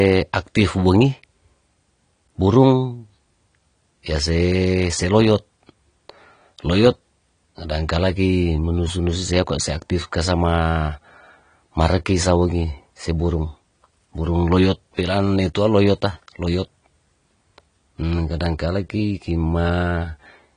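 From start to finish the speech has lost its top end: there's nothing above 10 kHz, so it sounds dull, and the coding damage is plainly audible the whole way through. That's most likely AAC compression, specifically AAC-LC, with the sound pointing to a low bitrate around 32 kbps. At rates like that the encoder quantises its frequency lines coarsely against its hearing model and pulls the cut-off down to spend its few bits on the lower bands.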